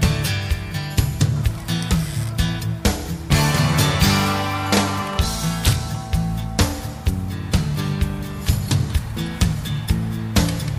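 No technical faults can be heard anywhere here.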